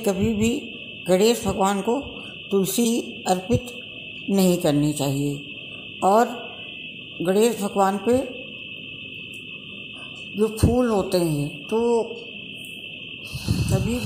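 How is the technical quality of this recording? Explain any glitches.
The recording has one glitch, a brief burst of damaged data in a compressed stream from about 2.84 to 2.86 s. For roughly 20 ms, bytes in the encoded file were corrupted, so the decoder misread those frames, lost its place and resynchronised at the next valid frame header. The result is a short glitch, heard as a chirp, squawk, click or brief hole. Unlike a plain dropout or a clipping click, this glitch comes from bad data that the decoder could not read correctly.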